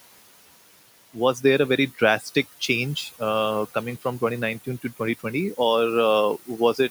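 Speech runs through noise suppressor artifacts for the whole clip. Between phrases the background drops by about 18 dB, then rises again beneath the voice, while the room noise, sitting about 16 dB under the speech, is heard through it. The suppressor is attenuating frequency bands frame by frame, which is why the noise pumps with the talking. A plain noise gate would instead cut everything at once, abruptly.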